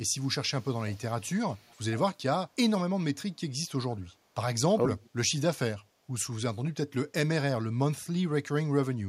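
Echo leak in this speech clip at 0.2–0.28 s, 0.58–1.21 s, 1.49–1.97 s and 5.01–5.1 s: a faint copy of the voice trails it by about 0.49 s, likely because a far-end loudspeaker echo canceller let some of its microphone pickup through.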